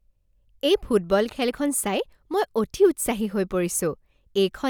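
No technical faults can be heard anywhere in the speech.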